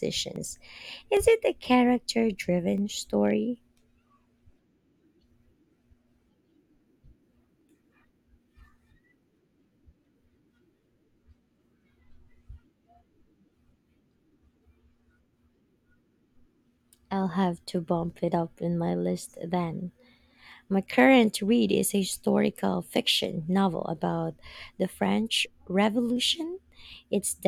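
Speech with a regular click every 0.8 s from 0.36 s to 26.97 s, likely clock drift buffer slips, as mismatched device clocks, around 500 ppm apart, drop or repeat small sample blocks.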